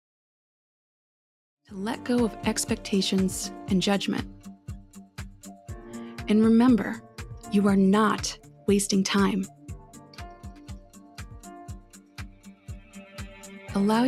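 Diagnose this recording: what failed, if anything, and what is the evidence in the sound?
What failed is call processing: a speech-tuned noise suppressor was left running on non-speech audio. It treats sustained material and tails as noise, so the level keeps swinging by about 10 dB across the clip. Onsets punch through, then held sound sinks and pumps.

The clearest moments are where the suppressor turned the sound down hardest: 4.56 to 5.18 s (down about 11 dB), 8.38 to 8.68 s (about 8 dB), 9.48 to 11.19 s (about 9 dB), and 11.41 to 13.59 s (about 11 dB). Each is a stretch where the suppressor pulled the level down, unlike the smooth fade-in ending at 2.26 s.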